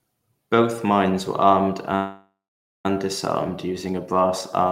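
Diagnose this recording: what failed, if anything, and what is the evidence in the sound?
After "mines were armed", the speech stops at 1.95 s and the last sound is drawn out as a fading buzz that drops to silence for about half a second before "disarmed using a brass" resumes at 2.86 s. Nothing is skipped; the sentence picks up exactly where it broke off, now about 0.9 s late. That pattern marks a call audio freeze at the network stage, likely from packets held up in transit until the jitter buffer ran dry and the receiver filled the wait.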